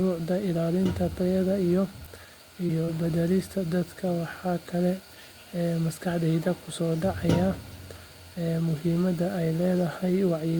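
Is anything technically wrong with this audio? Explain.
Yes, there's short concealed packet loss in two spots, at 2.67 to 2.71 s and 2.85 to 2.90 s. About 20 ms of the speech arrived too late each time, so the decoder guessed its way across, stretching the preceding sound before easing back in. You hear quick smeary wobbles.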